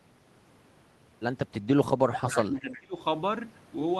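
From 2.06 to 3.0 s the speech dips by about 20 dB, which sounds like speech suppressed in double talk: the echo canceller likely mistook this talker for loudspeaker echo while the far side spoke, and attenuated both.

At 2.72 to 2.79 s a brief, faint echo leak appears, a delayed copy arriving 357 ms behind the original and sitting well below the speech. Its likely source is residual loudspeaker pickup that the echo canceller failed to remove.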